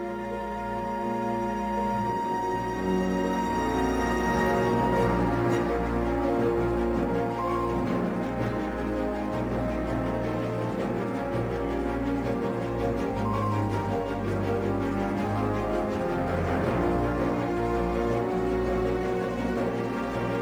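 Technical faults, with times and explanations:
Throughout, crude rate conversion: unfiltered nearest-sample picking, which fits a 48 to 44.1 kHz change, leaves a gritty, inharmonic fizz roughly 35 dB below the sound.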